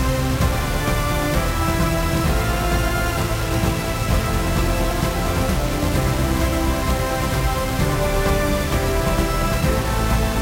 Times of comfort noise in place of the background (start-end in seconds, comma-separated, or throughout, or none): none